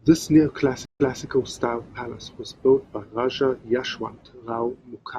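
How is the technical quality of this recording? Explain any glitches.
One glitch stands out. From 0.85 to 1.23 s, the speech cuts to silence for 148 ms, then resumes 235 ms earlier, repeating audio just before "style palace was built". This is a stream reconnect: the connection dropped, and a fresh decoder restarted from a resent burst.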